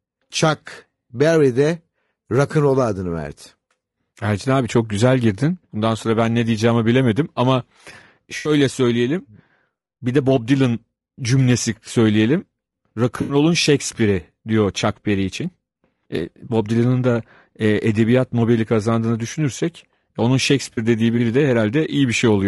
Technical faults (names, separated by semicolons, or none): low-delay AAC compression; AAC frame loss with concealment